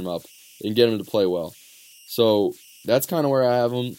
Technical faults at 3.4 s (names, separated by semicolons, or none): converter idle tones